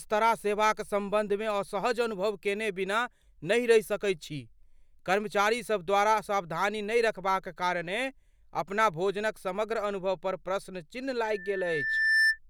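Right after "अनुभव पर प्रश्नचिन्ह", at 11.24 s, loudspeaker feedback squeal kicks in: the mic is hearing its own speaker, and the loop runs away at 1.8 kHz. A whistle swells over roughly a second to about 5 dB above the speech, lasting until 12.39 s.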